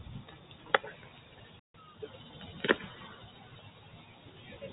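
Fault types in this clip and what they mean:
Noise suppressor applied to music or sounds: A speech-tuned suppressor was left running throughout, and it treats anything steady as noise. Sharp onsets get through, but sustained parts and decaying tails are pulled down, with the level swinging by around 5 dB as it clamps and releases. The result is a pumping, fluttery, thinned-out quality that never settles, layered over the narrow, phone-like band the call path leaves, which tops out around 4 kHz.
Playback stall: At 1.59 s the output simply drops to silence for about 147 ms, coming back at 1.74 s. That's a clean gap in the middle of the sound, not a fade or a dip. The likely cause is the player running dry on incoming data, or its audio thread getting held up, so there was nothing to hand to the output until it recovered and carried on.
Time-compressed catch-up: Right after the gap, from 1.74 to 2.32 s, the audio runs fast at 1.25 times normal speed while keeping its pitch. 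The player is shrinking the backlog that built up during the stall by trimming out tiny slices and cross-fading the joins. You hear it as a brief hurried stretch, before the timing drops back to normal pace.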